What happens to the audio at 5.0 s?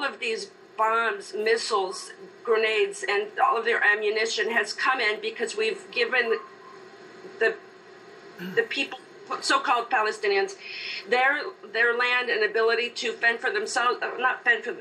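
At 4.98 s, compressed frames are skipped: about one 26.1 ms frame goes unplayed, so the audio jumps ahead roughly 30 ms with no silent gap, unlike a dropout.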